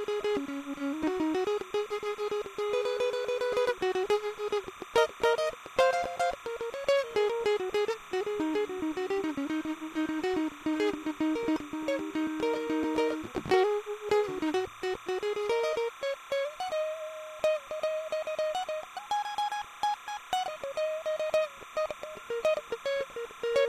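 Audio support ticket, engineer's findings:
Timecode bleed throughout the music. Steady chirping warble near 1 and 2 kHz, roughly 20 dB down. Linear timecode at 30 frames/s leaking from an adjacent track or cable.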